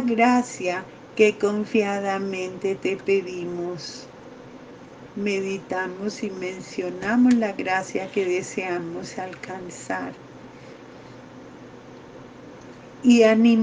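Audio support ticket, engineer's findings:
No faults found on review.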